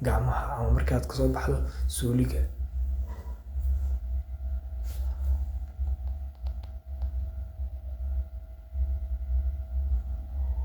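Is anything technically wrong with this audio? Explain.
No, nothing in this speech recording stands out as technically wrong. There is no fault here to locate or explain.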